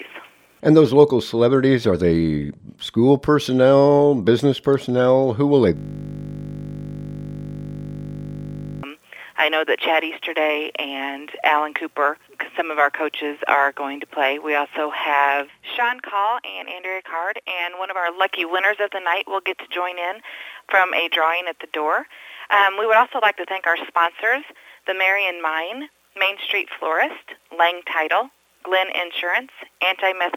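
The audio has a system hang loop from 5.77 to 8.83 s. A single 20 ms slice repeats exactly, about 150 times, giving a steady 50 Hz buzz. The system froze while the hardware kept replaying one ring buffer, which fits a 20 ms buffer.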